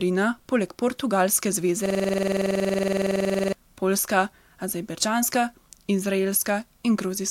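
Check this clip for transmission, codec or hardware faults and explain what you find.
There is one fault: a system hang loop from 1.86 to 3.53 s. The system froze while the sound device kept replaying its ring buffer. A 46 ms slice repeats 21.5 times a second, producing a rattling stutter. That length fits a 2048-sample buffer.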